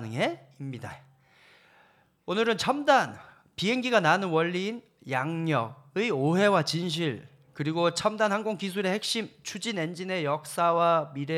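No technical faults are audible.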